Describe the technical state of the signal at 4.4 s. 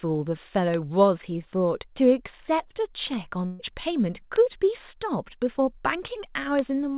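Right at 4.36 s there's a bit error spike: a single flipped bit in one sample throws the value off and back, giving one sharp, broadband tick.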